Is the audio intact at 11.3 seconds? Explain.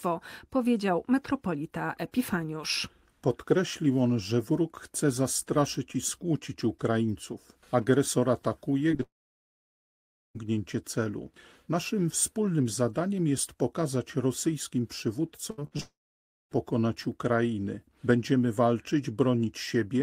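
Yes, the speech at 11.3 seconds is intact, with no dropout, click, distortion or other fault at that moment.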